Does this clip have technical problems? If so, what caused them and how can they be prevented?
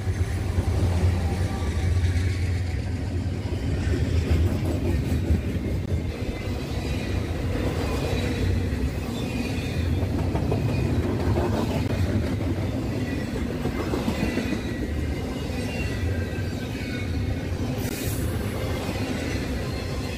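Yes. Short silences of 16 to 20 ms break the sound at 5.86–5.88 s, 11.88 s and 17.89 s. These are gaps at joins of encoded pieces, where untrimmed encoder delay and last-frame padding remain. Encoding the audio in one pass, or trimming each piece's delay and padding before joining, prevents them.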